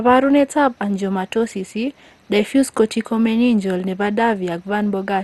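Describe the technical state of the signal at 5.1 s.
At 5.1 s the speech sounds dull and gurgling, with a grainy, watery distortion and nothing above 12.2 kHz, as it does throughout the clip. The likely cause is MP2 compression, which fits a rate of around 64 kbps. Layer II divides the signal into 32 sub-bands and shares out a bit budget. At this rate the top bands are switched off and the remaining ones are coarsely quantised, flickering in and out and giving the plainly audible damage heard here.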